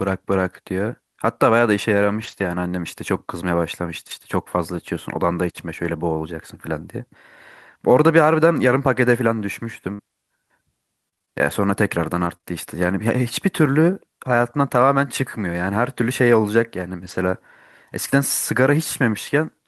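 A speech recording with three kinds of transmission fault. There are three stretches of lost packets rebuilt from error correction, at 2.19 to 2.45 s, 5.83 to 5.89 s and 17.03 to 17.17 s. Nothing drops out. The decoder played low-bitrate backup copies sent in the following packets instead. Those stretches, about 140 ms, 40 ms and 80 ms of rebuilt audio, sound rougher and noisier than the audio around them. The lengths fit several separate lost 20 ms frames. At 4.10 to 4.14 s a wireless microphone noise hit gives a brief burst of static. The radio signal of an analogue FM microphone faded for about 40 ms as reflections cancelled it. Receiver noise rose. From 9.93 to 12.45 s there is repeated packet loss, and the sound turns choppy and robotic. Eight gaps occur over this span, about 200 ms missing in all. The longest gap is 55 ms. Each gap was patched by extending the previous sound, and the next gap arrived soon after. 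Around 70 ms was rebuilt from partial data, and the rest was filled by concealment. That patching is what gives the broken texture.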